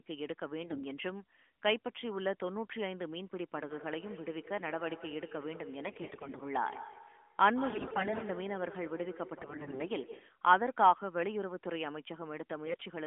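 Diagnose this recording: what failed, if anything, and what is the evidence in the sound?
The speech turns hoarse and gargly in five bursts while keeping its pitch and level: 0.64–0.83 s, 5.86–6.43 s, 7.70–8.24 s, 9.38–9.87 s and 12.66–12.86 s. These are AMR bit errors from the network's radio link. Roughly 7 to 15 percent of the weakly protected bits arrived flipped in runs of 20 ms frames, yet the checksum on the core bits still passed. The excitation pulses land misplaced and the fine gain and spectrum values drift, all within the 12.2 kbps AMR-NB band.

From 3.54 to 10.42 s each phrase returns as a trailing copy, about 12 dB below the direct speech, repeating roughly every 150 ms. This is feedback echo between two devices on the same call in one room. One device plays what the other's microphone sent, and that microphone captures the playback again. The loop lives in call processing: each device's echo canceller subtracts only its own loudspeaker signal, so the other device's output passes straight back into the call.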